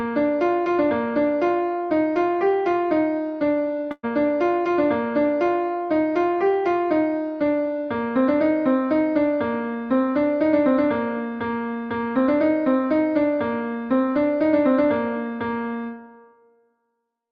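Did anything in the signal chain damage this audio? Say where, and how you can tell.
Yes, at the network stage: a burst of packet loss from 3.91 to 4.06 s. The receiver's concealment extended the last sound as a fading tail for 117 ms, then fell silent for 30 ms, and playback resumes with 120 ms of audio skipped.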